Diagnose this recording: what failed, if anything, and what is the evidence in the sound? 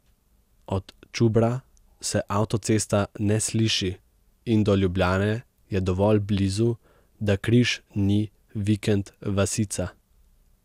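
Throughout the speech the sound is swirly and hollow, with smeared consonant attacks and a granular haze. Nothing is present above 16 kHz, and the damage is heavier than a single pass at that bandwidth would give. The stage is the codec, and the cause is likely generation loss: repeated decode-and-re-encode cycles, about four, consistent with MP2 at 128 kbit/s. Each pass requantises on a shifted frame grid, compounding noise and spectral holes.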